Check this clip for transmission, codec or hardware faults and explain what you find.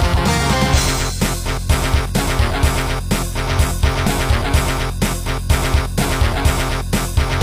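There's a stream-segment fault, an overlap between stream segments, at 2.09–2.12 s and 4.07–4.10 s. Overlapping timestamps made the player trim audio, dropping about 22 ms and 34 ms, so you hear tiny skips at the roughly 2 s segment joins.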